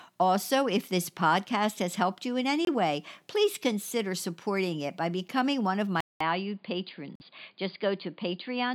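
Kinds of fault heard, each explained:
Corrupt frame muted: at 2.65 s and again at 7.15 s, the decoder rejected damaged compressed frames and the player substituted silence. The first gap lasts about 40 ms and covers one frame. The second lasts about 66 ms and spans three. Each starts abruptly, and timing carries on unchanged.
Input switched to a poorer device: from 6.0 s to the end, the speech turns dull and boxy, with nothing above 4.8 kHz. A 200 ms silence marks the change, and the level drops about 5 dB. New background noise sits roughly 45 dB under the speech, likely from a change to a different microphone or headset profile.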